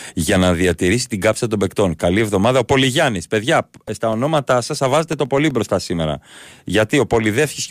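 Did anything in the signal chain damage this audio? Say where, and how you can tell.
Yes, at the driver or USB buffer stage: periodic USB or driver dropouts from 3.63 to 5.51 s, just before "μπροστά σήμερα". About fifteen regular ticks arrive every 0.125 s, each a gap of roughly a millisecond filled with silence, as the bus or driver stalls on a fixed schedule.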